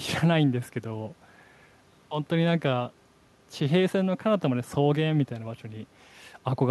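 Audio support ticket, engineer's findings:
No audible faults found.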